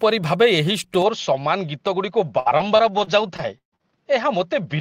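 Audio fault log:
1.02 s to 4.80 s, input switched to a poorer device: The sound turns dull and loses some level, roughly 5 dB quieter. Nothing remains above 6.7 kHz. A faint new hiss sits far below it. There is no silence at the change. The likely cause is a narrower-band microphone taking over.
2.39 s to 3.83 s, repeated packet loss (robotic sound): Seven holes come in quick succession, the longest 138 ms. Each is patched by stretching the last sound, so about a quarter of this stretch is filled-in tone. The result is choppy, with pieces missing.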